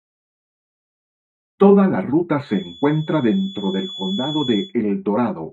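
From 2.41 to 4.74 s there's a thin, steady 3.4 kHz feedback whistle, well below the sound and swelling and fading slowly, likely from a loudspeaker-to-microphone loop sitting just at the edge of feedback.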